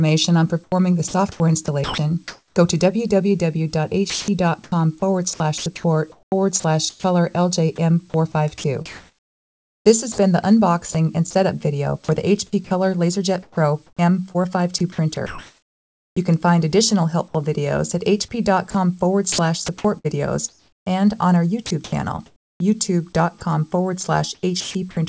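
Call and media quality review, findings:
Sound chopped by the voice detector, 0.64–2.56 s, 4.10–16.16 s, 18.70–23.41 s, 24.35–24.97 s. Likely sender VAD toggling transmit repeatedly. Quiet portions are replaced by comfort noise, about 0.66 s, 3.5 s, 1.1 s and 0.28 s in total respectively. The result is choppy sound.

Sound dropped by the voice detector, 17.28–17.34 s. Likely sender VAD misclassifying low-level sound as background and halting transmission. About 30 ms of sound is lost and 60 ms of comfort noise fills the gap.

The call path band-limits everything to nothing above 8 kHz, consistent with G.722 at 64 kbps.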